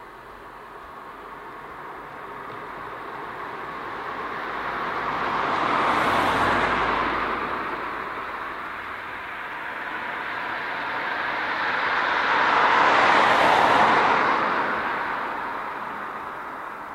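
No technical faults can be heard anywhere here.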